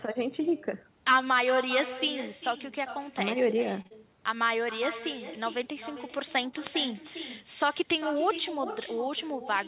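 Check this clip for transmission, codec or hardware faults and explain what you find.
Yes, there are three faults here: an echo that runs through the whole thing, and a back-to-back stall and dropout just before 4 seconds.

The echo with no canceller is present throughout. Each phrase comes back roughly 0.4 s later, about 12 dB down, sounding thinner than the original. What's happening is that the far end is playing the call through a loudspeaker, its microphone picks that playback up, and nothing strips it out before it's sent back. So you hear your own voice returning after the full network round trip, trailing behind what you say.

The short stall from a late packet runs from 3.82 to 3.87 s. A packet didn't arrive on time, the jitter buffer ran dry, and the receiver stretched the last bit of sound for 28 ms until the packet showed up. Then playback picked up exactly where it left off, so nothing is actually lost. 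What you hear is a brief hold or drawl on that sound, and from then on everything plays 28 ms later than it did before.

The short concealed packet loss follows immediately, from 3.87 to 3.92 s. This time about 40 ms of audio never made it to the decoder, and the receiver covered the gap with roughly 35 ms of synthesized sound, extending the previous sound's pitch or filling with shaped noise, then cross-fading back into the real signal. Coming straight after the stall, it makes that moment sound smeared and wobbly, and the brief gap can take a quick sound with it. All of this sits on a narrowband call path, with nothing above 4 kHz, which fits G.711.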